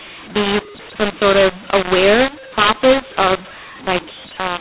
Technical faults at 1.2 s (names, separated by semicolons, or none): mu-law and A-law mixed up